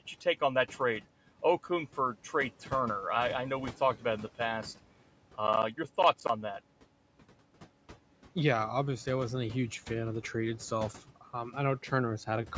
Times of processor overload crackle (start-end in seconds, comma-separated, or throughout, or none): 5.47-6.29